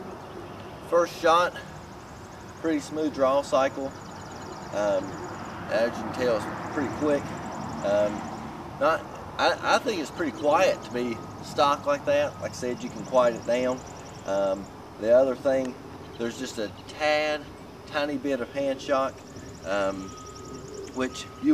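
A single sharp click at 7.15 s is likely caused by dropped samples: a fraction of a millisecond of audio went missing, making the waveform jump abruptly.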